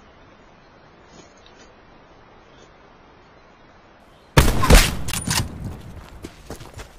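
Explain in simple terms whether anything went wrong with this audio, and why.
For the first four seconds the sound is dull, with stronger compression artefacts, a muffled quality and nothing in the high treble above about 7 kHz. At 4.0 s it suddenly becomes clearer and brighter, with no gap. This is an adaptive stream starting at a low bitrate. The player began on a small, heavily compressed version so playback could start quickly, then switched to a better copy once it had checked how fast the connection was.

At 5.12 s there is a very brief silence, and the sound picks up from a slightly different point instead of continuing smoothly. That is a CD skip. A knock or a flaw on the disc made the laser jump to another turn of the disc's spiral track. The player muted for a split second and then carried on from the wrong spot, so a sliver of the recording was jumped over or repeated.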